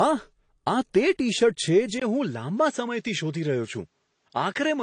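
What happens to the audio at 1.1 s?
At 1.1 s the speech is affected by a fault that runs through the whole clip: transcoding between lossy codecs, likely a low-rate AAC-style encode later re-encoded as MP3. The second encoder spends its bits reproducing the first one's damage while adding its own, so two sets of artefacts overlap: a smeared, swirly texture with a grainy edge. Nothing remains above 10 kHz, leaving the speech dull and band-limited.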